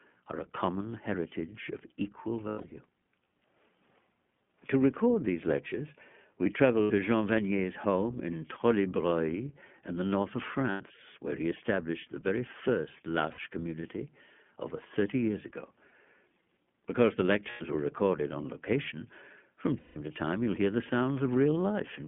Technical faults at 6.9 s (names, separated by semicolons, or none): iLBC codec; lost iLBC frames